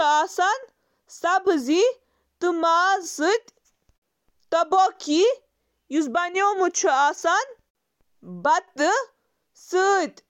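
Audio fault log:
Listening to the speech, nothing stood out as a fault at any point.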